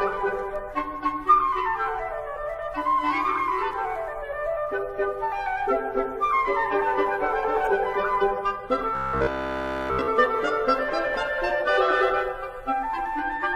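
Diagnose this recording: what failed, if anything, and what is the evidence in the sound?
Two corrupt frames decoded point to a codec-stage fault. The first is a brief blip at 0.69 to 0.72 s, faint at about -35 dBFS. The second, at 7.64 to 7.67 s, is clearly louder at about -20 dBFS. Each lasts about 30 ms, one compressed frame's worth. Flipped bits in the frame gave the decoder wrong gains or misread spectral codes, so it rendered a short burst of energy at frequencies the original never had.

From 8.95 to 10.09 s the sound turns into a rigid, metallic drone with a steady 66.7 Hz buzz, which is robotic sound from repeated short buffers. A 66.7 Hz repeat rate matches a 15 ms block replayed over and over, and across that stretch essentially everything heard is repetition rather than new audio. The likely cause is the driver or playback buffer starving and looping its last block while incoming audio is skipped.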